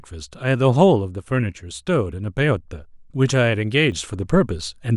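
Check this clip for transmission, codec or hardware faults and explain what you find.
One fault stands out. A sudden gain jump at 3.92 s lifts the speech and background noise together by about 6 dB until the end, likely from an unramped digital gain change. The waveform envelope steps up abruptly, and the spectrogram brightens across all frequencies at once.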